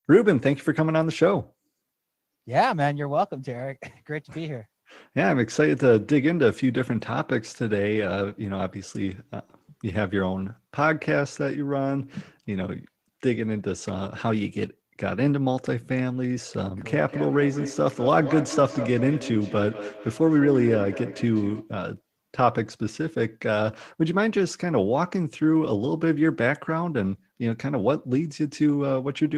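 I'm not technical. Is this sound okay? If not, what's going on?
No. From about 17.1 to 21.8 seconds there is feedback echo between two devices. The speech comes back again roughly every fifth of a second, sounding thinner and more ringing each time. This happens when two devices in the same room join one call. One device plays the other's sound, and that second microphone picks it up again. Each device only cancels its own echo, so this loop gets through.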